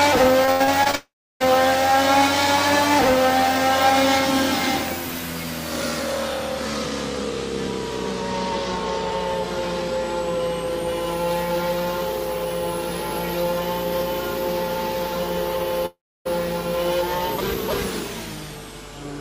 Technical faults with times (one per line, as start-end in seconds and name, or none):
0.45-0.95 repeated packet loss (robotic sound)
0.95-1.46 long network dropout
15.86-16.27 long network dropout